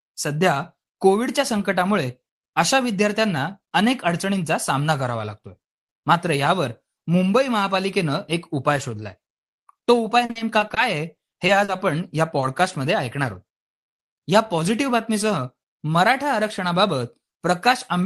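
From 10.25 to 10.78 s the speech breaks up with repeated packet loss, giving a robotic sound. Audio keeps failing to arrive in time. Each hole is patched by stretching the last sound, and another hole comes soon after. The gaps are short, the longest about 40 ms. Together they cover about 28% of that span. The result is choppy, with bits of speech missing.

The same fault returns from 11.16 to 11.80 s. Again the longest gap runs about 40 ms, and about 22% of the span is patched. The chopping is a little sparser. The top of the spectrum stops near 12 kHz, which points to a call codec in the path.

From 12.40 to 12.44 s there is a short concealed packet loss. About 20 ms of audio never arrived. The receiver filled it by continuing the previous sound, then blended back into the real signal. It comes across as a brief smear or wobble.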